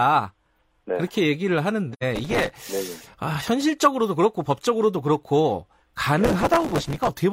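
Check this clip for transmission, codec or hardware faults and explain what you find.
Two kinds of fault are present: one AAC frame loss with muting and two bursts of processor overload crackle.

From 1.93 to 2.03 s there is an AAC frame loss with muting. The decoder zeroed the missing data, and the sound fades out and back in. The gap fits about two lost frames.

From 2.16 to 2.55 s and from 6.24 to 7.09 s there is processor overload crackle. Buffers of a few milliseconds missed their deadlines and replayed old audio. Their hard edges make a gritty crackle over the speech.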